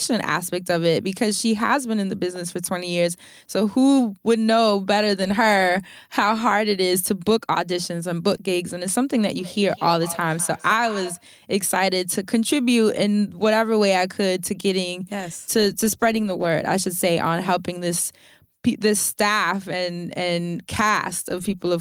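From 9.37 s to 11.3 s the speech comes back at a steady interval of roughly a fifth of a second, peaking about 16 dB below the direct sound. This is feedback echo between two devices: a second device in the room replays what the first one's microphone sent, that microphone picks it up again, and neither echo canceller removes sound it didn't play itself. Unlike room reverberation, which blurs into a smooth decay, these return as distinct, evenly spaced repeats.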